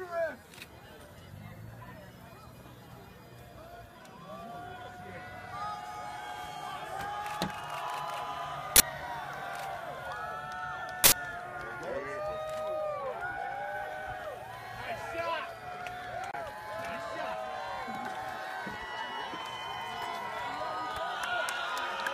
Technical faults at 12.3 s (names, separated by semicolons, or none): none